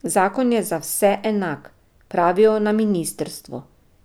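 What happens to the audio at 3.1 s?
Nothing goes wrong at 3.1 s: the speech plays through that moment intact, with no dropout, click, distortion or other fault.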